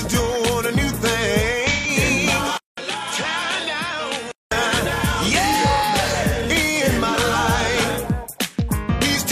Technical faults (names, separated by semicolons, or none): AAC frame loss with concealment; input switched to a poorer device